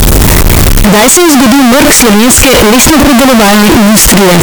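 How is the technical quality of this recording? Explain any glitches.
The quality is very poor. Throughout, the speech is blasted into a harsh, almost square-edged waveform at an almost fixed, high level, with background noise as loud as the talking, though pitch stays followable. This is likely a float read as integer: 32-bit float samples interpreted as 32-bit integers, so sign and exponent bits set the level. Unlike ordinary clipping, quiet passages and noise are just as loud as speech.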